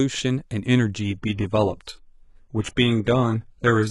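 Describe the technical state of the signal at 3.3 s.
At 3.3 s the speech sits inside an adaptive stream at a lower bitrate, from 1.0 s to the end. Codec artefacts rise after a sudden drop in quality, which fits a low-bitrate HE-AAC stream. On a spectrogram, the upper band looks smeared and patchy, with no waveform gap at the switch.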